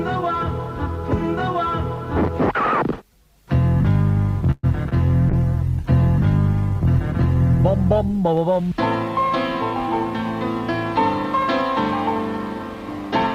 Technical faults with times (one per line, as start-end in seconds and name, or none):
4.51-4.65 call audio freeze
4.89-4.93 short concealed packet loss
5.30-8.26 call bitrate drop